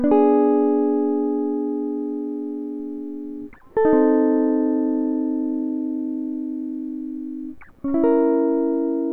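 No technical faults can be heard anywhere in the music. There is nothing here that needs to be placed in time or explained.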